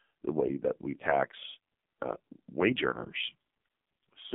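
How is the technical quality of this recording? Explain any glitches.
Quality is poor, marred by heavy mobile-codec damage across the whole recording.

AMR narrowband mobile codec, throughout: a vocal-tract model rebuilds speech from sparse pulses within roughly 150 Hz to 3.5 kHz, leaving nothing above 3.6 kHz. The speech sounds muffled, buzzy and synthetic, which fits one of the lowest bitrate modes, around 5 kbps.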